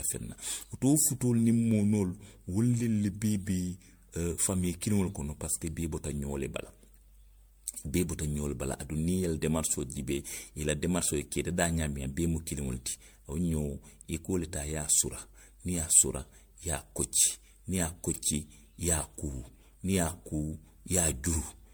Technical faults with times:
0.00-21.74 generation loss

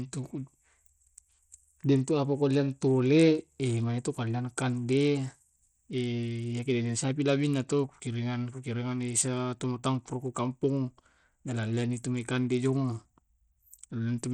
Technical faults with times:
0.00-14.34 Bluetooth SBC compression

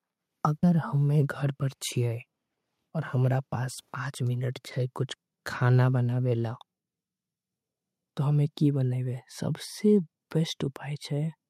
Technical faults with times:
none

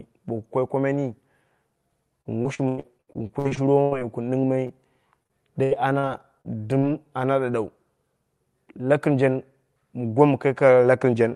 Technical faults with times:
2.21-4.03 repeated packet loss (robotic sound)
4.67-4.71 short concealed packet loss
5.23-6.05 repeated packet loss (robotic sound)
6.41-6.47 short concealed packet loss
6.79-6.84 short concealed packet loss

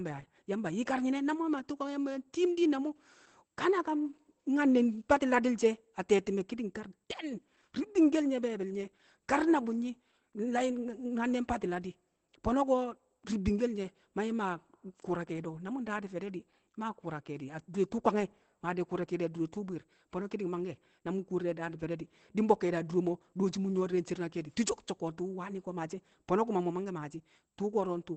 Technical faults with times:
0.00-28.16 Opus voice compression

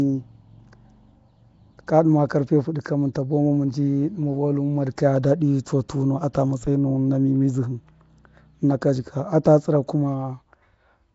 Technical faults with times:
0.00-11.14 Nellymoser compression
6.33 pre-echo
9.44 pre-echo

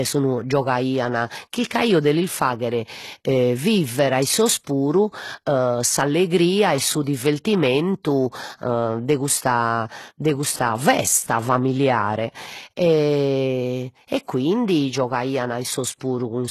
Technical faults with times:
0.00-16.50 HE-AAC compression

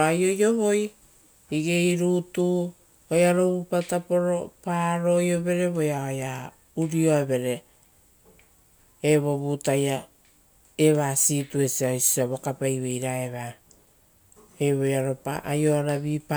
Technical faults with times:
none

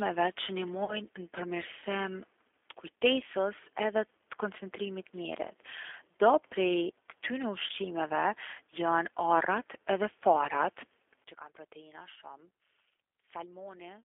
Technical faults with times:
0.00-14.05 G.729 codec
0.85-1.01 VoIP packet loss concealed by the speech codec
7.67-7.72 VoIP packet loss concealed by the speech codec
11.24-14.05 one channel inverted

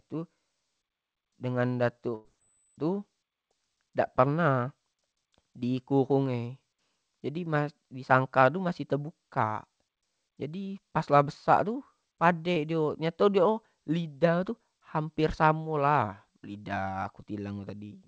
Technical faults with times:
2.15-2.28 burst of packet loss
12.54-12.59 short concealed packet loss

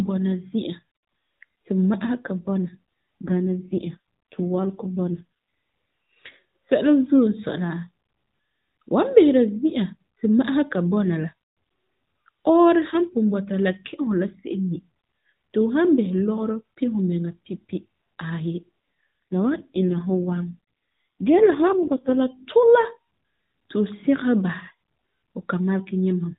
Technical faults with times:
3.26-5.24 AMR rate drop
19.32-22.16 AMR rate drop

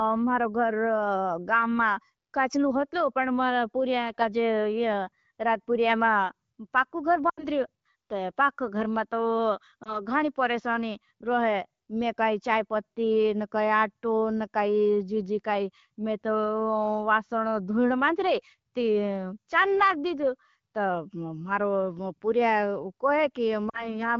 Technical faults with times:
7.29-7.46 lost AMR speech frames
9.83-10.00 lost AMR speech frames
23.70-23.96 lost AMR speech frames

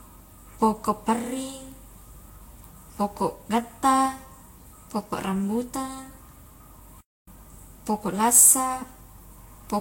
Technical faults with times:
0.00-9.81 generation loss
7.00-7.28 playback stall

